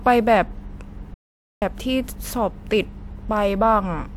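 At 1.14 s the speech cuts out abruptly and returns at 1.62 s, an audio dropout to silence lasting about 0.48 s. The gap is dead digital silence with no room tone, so whatever was said there is lost. The likely cause is the input briefly disconnecting or muting while recording continued. On a waveform it shows as a near-flat line; on a spectrogram, a dark vertical band with hard edges.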